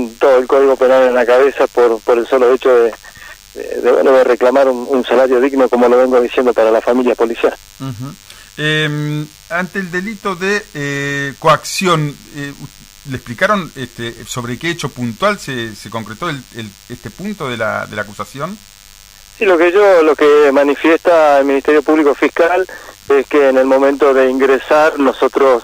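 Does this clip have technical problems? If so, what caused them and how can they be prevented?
Yes. A DECT cordless phone buzz runs throughout, a thin, raspy 100 Hz tone with dense harmonics, around 30 dB below the signal. A nearby handset or base station sends radio bursts every 10 ms, and the audio circuitry rectifies them. Unlike smoother mains hum, it sounds steady, thin and buzzy rather than smooth. Keeping DECT phones and base stations a few metres from microphones, cables and interfaces prevents it.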